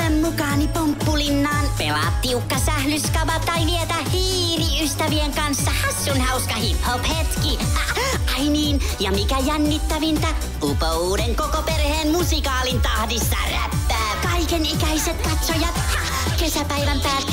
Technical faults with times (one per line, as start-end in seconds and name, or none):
11.58-14.19 video or display buzz